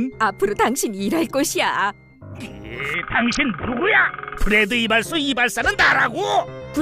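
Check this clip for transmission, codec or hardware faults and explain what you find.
One transmission fault is present. From 2.94 to 4.38 s there is a Bluetooth SBC bit pool drop. The treble goes dull and gritty noise rises. The starved encoder is dropping the top sub-bands, which fits a bit pool cut from 31 to 5, near 50 kbps.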